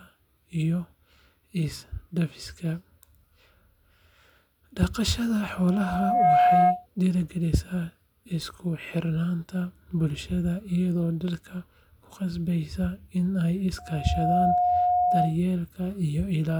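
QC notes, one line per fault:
5.57–6.86 s: loudspeaker feedback squeal. A 719 Hz tone swells over roughly 0.7 s to about 10 dB above the speech, as the mic-speaker loop exceeds unity gain.
13.78–15.37 s: loudspeaker feedback squeal. The same 719 Hz tone builds in about half a second, peaking around 5 dB over the speech.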